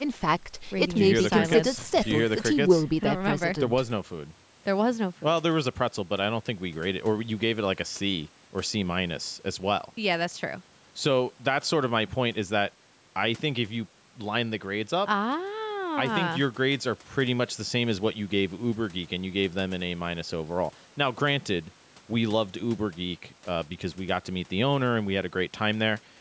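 Nothing here counts as a fault: the speech just carries the usual call microphone processing, with its trimmed low bass and nothing above 8 kHz, and that's expected for this kind of audio.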